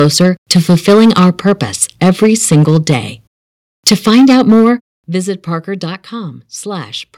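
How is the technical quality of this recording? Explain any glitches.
The recording has two related problems: heavy distortion from an overdriven input, and sudden drops in level as the input is turned down.

Microphone overload is heard from 0.0 to 1.51 s, 1.82 to 2.96 s and 3.87 to 4.7 s. The likely cause is an input set too high, so the loudest peaks run into the converter's ceiling and their tops are sliced flat. The signal overshoots by about 6 dB in the first two stretches, with around a tenth and then a twentieth of samples clipped. The third stretch is worse, about 11 dB over with roughly 15% clipped, giving a harsh, crackling edge to the loudest syllables.

Microphone volume stepped down occurs at 3.89 s and again at 4.89 s. This is likely the call software reacting to the overload by cutting the device's input level in one jump rather than gradually. The first step is small, about 3 dB, landing just as the worst clipping begins. 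The second, about 9 dB, comes right after that distorted stretch ends, so speech and background both fall abruptly.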